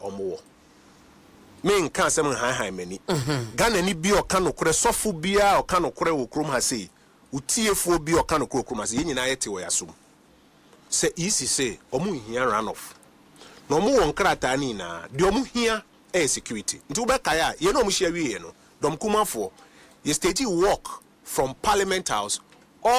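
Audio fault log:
No audible faults detected.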